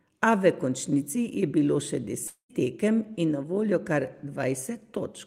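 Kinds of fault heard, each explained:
Long network dropout: 2.27 to 2.51 s, the speech breaks off into a smeared, fading buzz lasting about 217 ms, including about 100 ms of silence. About 220 ms of speech never returns, likely because packets were lost in transit.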